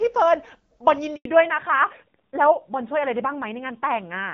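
At 1.15 s the speech cuts out for 100 ms, until 1.25 s. This is a handover gap: the call switched networks and no speech frames arrived meanwhile. From 1.25 s to the end there is a fallback to narrowband. Everything above 4 kHz disappears, and the voice turns duller and rougher, which fits a drop from wideband to a narrowband codec near 7.4 kbit/s.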